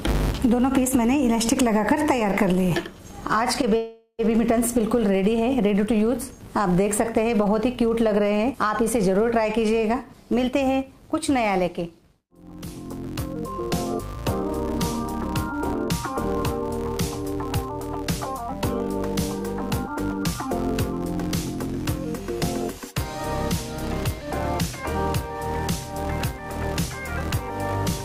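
From the first moment to the end, a steady 200 Hz buzz rides along with the sound, growing louder and quieter as the level rises and falls. This is a filter restarted on every block: the processing forgets its state at each block boundary and begins again from silence, so every block opens with a tiny click. Two hundred of these per second merge into a pitched buzz, which fits blocks about 5 ms long.

From 3.77 to 4.21 s the audio stops moving and the last sound is stretched into a buzzy tail that fades, with a short silence of about 30 ms at its end, before the audio picks up exactly where it stopped. This is a call audio freeze, likely caused by packets held up in transit until the jitter buffer ran dry. The receiver filled about 420 ms with the decaying tail, nothing was lost, and everything after the freeze plays 420 ms later than before.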